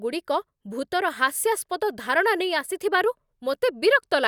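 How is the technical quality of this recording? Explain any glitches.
The speech signal holds steady throughout, with no glitches, dropouts or other technical faults to be heard.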